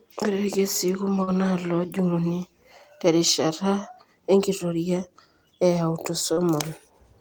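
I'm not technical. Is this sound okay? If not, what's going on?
No. Short concealed packet loss at 1.23–1.29 s and 6.33–6.39 s: about 40 ms of the call went missing and was patched with a guessed continuation. That gives a brief smear rather than a silent gap.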